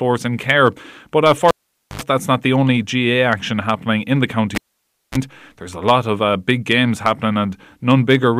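At 1.48 s and again at 4.55 s, the cable is pulled and plugged in. Each time a pop cuts the speech. Near silence follows for 0.48 s, then 0.58 s. A brief mains buzz comes from the tip-only contact: 79 ms at 50 Hz, then 31 ms at 60 Hz. Another pop brings the sound back before "that's not the only". The second dropout follows "action happening in the".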